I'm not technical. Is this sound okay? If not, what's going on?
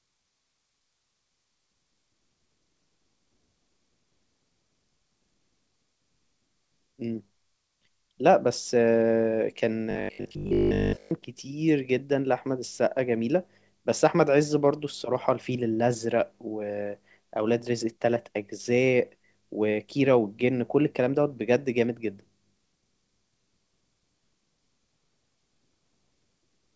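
No. Robotic sound from repeated short buffers, 9.91 to 11.11 s: a steady 50 Hz buzz replaces most of the sound, likely from one 20 ms scrap being replayed while fresh audio was late.

Short concealed packet loss, 16.83 to 16.86 s: 20 ms of audio never arrived, so the receiver covered the gap by extending the preceding sound, leaving a tiny smear.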